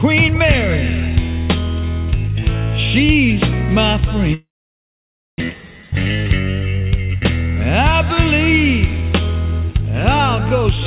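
Audio over a narrowband call link, with nothing above 4 kHz, which fits G.711 A-law at 64 kbps. From 4.34 to 5.42 s there is most likely a long network dropout. The last sound smears into a fading buzz or hiss, followed by about 0.93 s of near silence. Roughly 1 s of material is lost outright, and the audio resumes a few tens of milliseconds later than its earlier timing.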